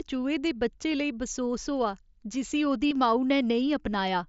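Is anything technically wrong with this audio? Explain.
Yes. There is a short burst of concealed Bluetooth headset packet loss from 2.88 to 2.91 s in this speech. About 37.5 ms of audio went missing between headset and phone, which fits a run of five lost frames. The receiver filled the gap by repeating the closest-matching stretch of recent waveform. That repetition is audible as a brief buzzy, held tone at full level. A slight warble follows as the real signal resumes. The link itself is mSBC wideband, with its light grain.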